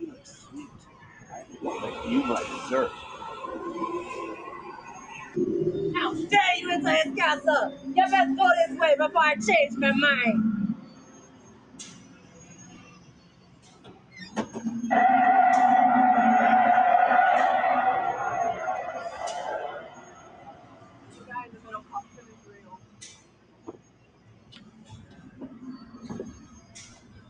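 A noise suppressor applied to music or sounds runs through the whole clip. Built for speech, it treats sustained tones, ambience and decays as noise, so the gain swings by around 20 dB. Onsets pass while held material and tails sag, giving a pumping, thinning quality.

Sound cut by the noise suppressor shows in six spots: 0.13 to 1.55 s (about 9 dB deepest), 4.8 to 5.1 s (about 6 dB), 10.75 to 14.16 s (about 11 dB), 19.8 to 25.39 s (about 11 dB), 25.81 to 25.99 s (about 7 dB) and 26.33 s to the end (about 10 dB). In each, steady or fading sound is pulled down or its decay shortened.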